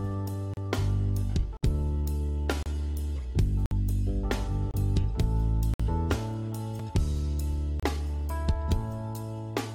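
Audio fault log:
0.54–0.57, 1.57–1.63, 2.63–2.66, 3.66–3.71, 4.71–4.74, 5.74–5.80, 6.79 and 7.80–7.83 s: gap between stream segments. Every second or so the sound drops to dead silence with hard edges. The holes mostly run about 29 to 58 ms, with a tiny 4 ms one at 6.79 s. The spacing points to 1-second segments whose timestamps don't quite butt up, so the player pads the gap with silence. Nothing is missing, just pushed later each time.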